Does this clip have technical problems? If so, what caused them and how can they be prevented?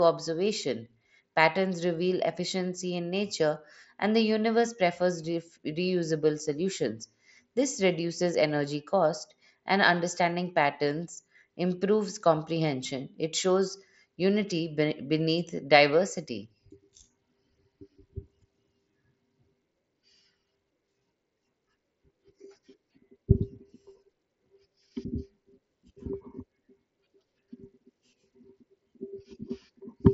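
No, there are no technical problems in this clip.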